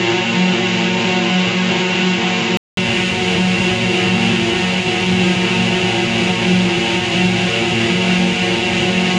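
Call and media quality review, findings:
Music band-limited 0–2.77 s, nothing above 7.8 kHz, dull, with a noise floor about 40 dB down; 200 ms dropout at 2.77 s, then full bandwidth returns at similar level. Likely input switched to a poorer device, narrower capture path until reverting.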